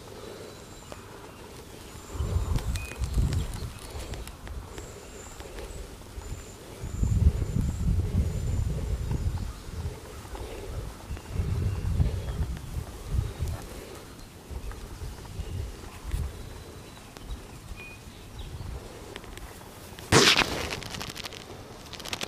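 Two loud pops sit on top of the sound, at 0.92–0.94 s and 17.17–17.19 s, peaking about 10 and 15 dB above it. They're likely voltage spikes from a plug, switch or static.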